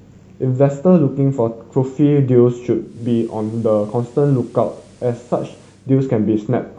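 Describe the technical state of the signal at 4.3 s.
At 4.3 s the receiver is in the middle of a digital radio blend to analogue that runs from 2.79 s to 5.94 s. The set has lost its digital stream and cross-faded, over about 288 ms, to the station's FM broadcast. Level drops by about 2 dB, and a steady FM hiss sits roughly 35 dB below the speech. A dropout or gap would cut out the sound, but here it continues unbroken through a smooth fade into noisier analogue reception.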